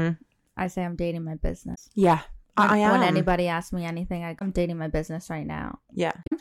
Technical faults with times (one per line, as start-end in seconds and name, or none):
1.71-1.78 damaged data in a compressed stream
4.35-4.42 damaged data in a compressed stream
6.23-6.33 damaged data in a compressed stream